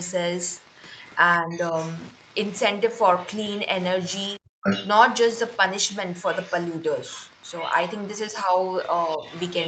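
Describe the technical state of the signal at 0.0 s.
Wi-Fi interference runs through the whole clip, including 0.0 s: a nearby radio's beacon, rectified by the audio circuit, gives faint ticking every 102.4 ms, well below the speech. From 0.02 s to 1.15 s the other side's voice is leaking through, a second, much quieter voice in the background, likely loudspeaker echo the echo canceller failed to remove.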